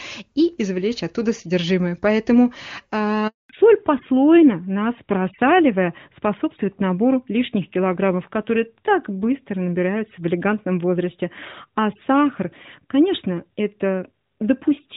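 A speech recording carried over a mobile call, with two linked faults. At 3.27 s there is a handover gap. The call was passed from one network to another, and no speech frames arrived during the switch. The sound fades within a few tens of milliseconds and stays silent for 220 ms, until 3.49 s. Whatever was said in that window is gone. At 3.49 s the new link takes over with a fallback to narrowband. Before the gap the clear, wide bandwidth fits AMR-WB HD Voice at its top rate of 23.85 kbit/s. From 3.49 s to the end, nothing above 4 kHz remains. The dull, rougher tone points to the older AMR-NB codec at 12.2 kbit/s. The voice loses its crisp consonants and sounds boxier for the rest of the clip.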